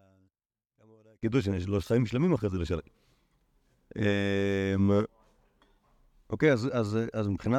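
One channel inverted, from 0.0 to 1.23 s: the speech drops by about 33 dB, leaving only a faint trace of the centred voice. The likely cause is reversed polarity on one stereo channel, so the shared signal cancels when summed to mono.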